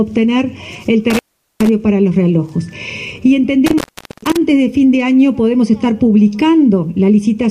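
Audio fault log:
1.10–1.69 s and 3.66–4.37 s, intermittent contact: the sound drops out twice, for about 0.41 s and then about 0.42 s, with crackle where the signal breaks and returns. During each gap faint hiss remains. This is a loose plug or cable connection briefly losing contact. The crackle comes from the contact scraping as it opens and recloses, and the near-silence in between is the broken signal path.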